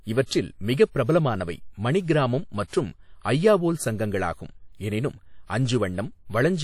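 From start to finish the speech carries a washy, ringing edge, with a hiss that swells and fades along with the talking, and nothing comes through above about 17.8 kHz. That's most likely WMA compression at a fairly low rate, something around 48 kbps by the sound of it. The transform codec smears its quantisation noise over long blocks, so it hangs around transients, and quieter spectral detail gets dropped outright, which leaves the audible damage.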